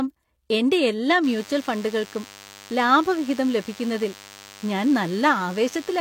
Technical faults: DECT cordless phone buzz

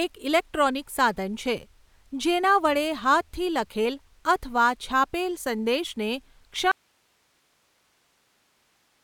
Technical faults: audio dropout to a faint residue

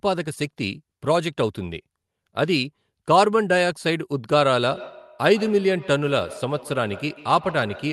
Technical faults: feedback echo between two devices

